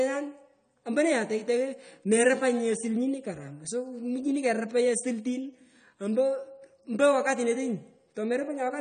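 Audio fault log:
Throughout: AAC compression. The speech sounds dull and smeared, with a plainly audible warbling, fizzy texture on sustained sounds and sibilants. Nothing is present above 9 kHz. On a spectrogram this shows as a hard, flat ceiling at 9 kHz, with patchy holes and blotchy noise-filled regions in the upper bands beneath it. The likely cause is AAC-LC coding at a low bitrate, consistent with about 32 kbps, starving high frequencies of bits.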